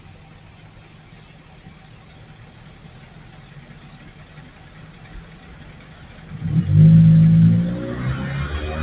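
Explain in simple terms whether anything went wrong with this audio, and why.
Throughout the clip, the sound keeps dipping and recovering. Sharp starts come through, but anything held or lingering sinks, so the audio pumps and thins, with swings of roughly ten times in power. This is a noise suppressor applied to music or sounds. A suppressor built for speech treats steady tones and trailing echoes as background noise and turns them down. The call line it travelled over carries nothing above 4 kHz.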